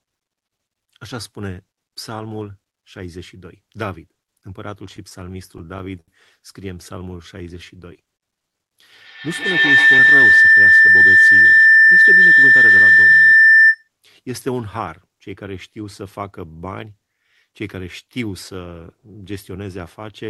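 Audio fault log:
4.91–6.10 s, repeated stalls (stutter): The audio keeps catching and restarting here, ten times in just over a second. Packets were turning up late or slower than playback, so the jitter buffer kept running dry and the receiver stretched the last bit of sound to cover each gap. That adds up to 172 ms of filler, about 15% of the stretch, with the longest hold at 74 ms. Nothing is actually lost, but it drags and hiccups.
6.98–7.99 s, jitter buffer slow-down: This second sounds a bit drawn out, as if someone eased off the tempo, though the pitch stays put. The buffer was short on reserve, so the receiver repeated single pitch periods and slivers of pauses over and over to rebuild it. That adds 108 ms and puts playback at 90% speed, so the sounds stretch.
8.92–13.90 s, feedback howl: A whistling tone at roughly 2 kHz swells up and sits on top of everything for about five seconds, peaking around 16 dB above the speech. 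Two devices in the same room were on the call, so each pass from loudspeaker to mic came back louder. Every lap narrowed the sound toward the frequency the loop favours. The loop's round-trip time is roughly 150 ms, and the howl stops once the loop breaks.
9.99–11.03 s, jitter buffer speed-up: Inside the howl, the underlying audio briefly sounds rushed, playing at about 110% speed with the pitch unchanged. The buffer had built up more audio than it wanted, typically after delayed packets arrive in a bunch. To pull the delay back down, the receiver snipped out short chunks one or a few pitch periods long, around 100 ms in total. The result is a hurried feel to that second.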